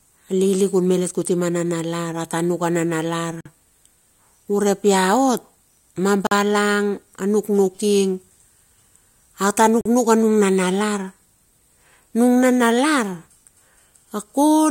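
Separately encoded pieces of this speech clip were joined untrimmed, so gaps at the joins, each about 45 ms long, cut the sound at 3.41, 6.27 and 9.81 s.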